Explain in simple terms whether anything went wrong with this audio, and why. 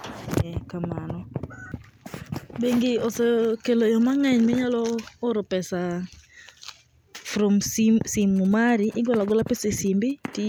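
From 8.21 to 10.35 s, a faint galloping dit-dit-dit of short buzzes at about 217 Hz cuts into the speech. These are GSM signalling bursts, from a nearby mobile phone's radio pulses picked up by the audio circuit. Unlike steady mains hum, the buzz comes in irregular clusters.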